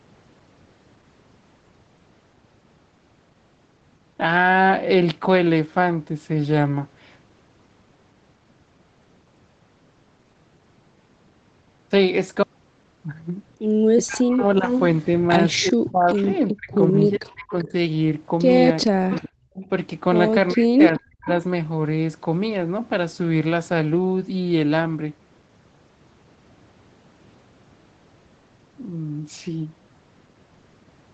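From 13.98 to 17.73 s, the echo canceller likely could not tell the near talker from loudspeaker echo while both sides spoke. This is speech suppressed in double talk: the voice drops by roughly 35 dB in pieces totalling about one and a half seconds. Inside that stretch, at 14.69 to 14.80 s, an echo leak lets a short copy delayed by 386 ms through at about 5 dB below the speech. A quieter leak follows from 15.53 to 17.72 s at about 20 dB down, from a canceller that likely left part of its microphone pickup in the signal. From 18.81 to 19.68 s the same 386 ms echo returns at about 15 dB down, overlapping suppression from 18.87 to 19.30 s that cuts the voice by roughly 40 dB. From 20.53 to 21.28 s the voice again dips by roughly 40 dB, and the delayed echo reappears from 20.98 to 21.28 s at about 20 dB down.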